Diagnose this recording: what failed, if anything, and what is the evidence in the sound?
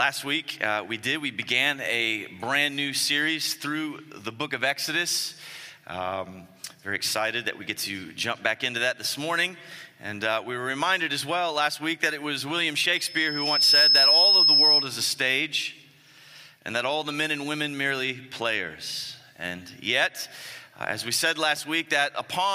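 Loudspeaker feedback squeal from 12.94 to 14.96 s, arising in the analogue acoustic path between microphone and loudspeaker. A single tone near 5.2 kHz swells over well under a second, then sits roughly 10 dB above the rest of the sound until it stops. The microphone was picking up the loudspeaker it fed, and at 5.2 kHz the loop gain passed one, so that frequency fed on itself and grew.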